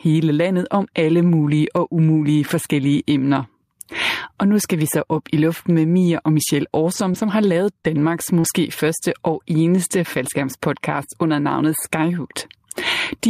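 Input gain set far too high for the microphone, with a fast limiter or compressor clamping down on each loud syllable, is the likely cause of the gain pumping that runs through the whole recording. The level swings by about 15 dB. Loud and quiet syllables sit close together in level, so the speech sounds squashed and breathes unnaturally.

From 6.93 to 8.46 s, scattered short gaps appear where a handful of packets went missing or arrived too late. The receiver filled each hole by extending the sound that came just before it. There are about four separate gaps, none longer than around 40 ms, and together they account for 80 ms of lost audio patched with 120 ms of rebuilt signal. They come through as brief ticks and small smeared hiccups just before "første og eneste faldskærmspodcast".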